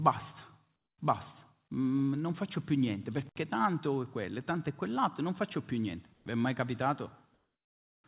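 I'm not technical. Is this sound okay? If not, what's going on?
No. At 0.76 to 0.98, 6.14 to 6.26, and 7.34 to 8.04 seconds, the background goes flat and quieter. This is likely comfort noise in place of the background, from a call system filling pauses.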